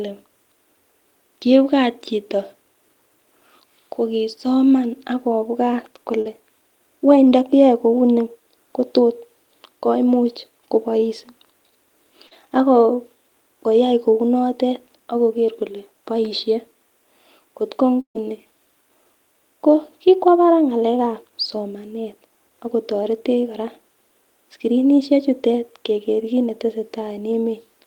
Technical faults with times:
6.21-6.27 short concealed packet loss
7.29-7.33 short concealed packet loss
12.27-12.33 short concealed packet loss
18.01-18.17 burst of packet loss

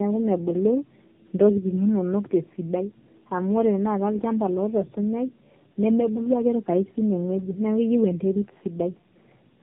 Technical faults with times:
0.00-9.63 tandem speech coding

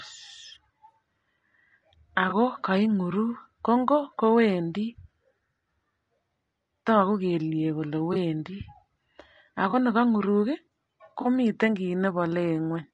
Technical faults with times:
0.00-12.94 low-delay AAC compression
2.29-2.33 AAC frame loss with concealment
8.13-8.16 AAC frame loss with concealment
9.69-9.75 AAC frame loss with concealment
11.21-11.27 AAC frame loss with concealment

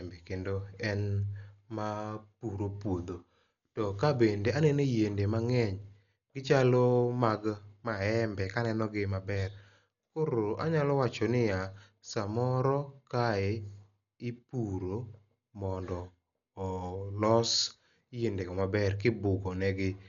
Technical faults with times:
0.00-20.08 Dolby Digital compression

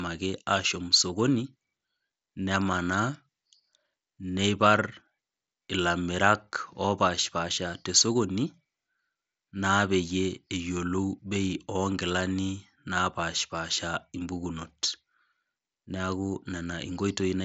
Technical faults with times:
none

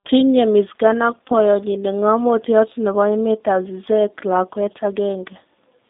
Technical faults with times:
0.00-5.90 G.729 codec

